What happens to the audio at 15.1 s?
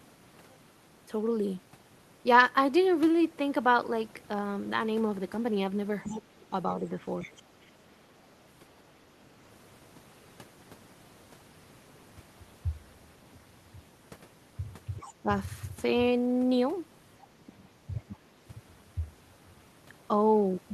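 The other side's voice leaking through, from 14.98 to 15.13 s: a faint second voice, well below the talker, likely echo the canceller failed to remove from the loudspeaker. Right after, from 15.2 to 15.29 s, speech is suppressed in double talk: the talker dips by roughly 15 dB, likely because the canceller turned both sides down during overlap.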